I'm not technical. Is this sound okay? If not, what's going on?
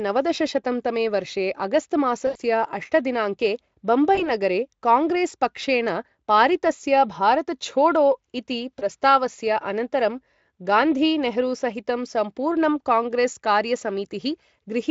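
No, there are three brief glitches from VoIP packet loss concealed by the speech codec: at 2.27 to 2.36 s, just before "अष्ट दिनाङ्के"; at 4.15 to 4.30 s, before "काङ्ग्रेसपक्षेण पारितस्य"; and at 8.79 to 8.83 s. Bits of the call went missing, and the codec (which sounds like Speex) filled each gap by stretching the last sound into a short buzzy or noisy smear that fades out.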